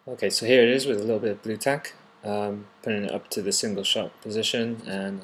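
No technical faults can be heard anywhere in the audio. Nothing in it calls for a timestamp or a repair.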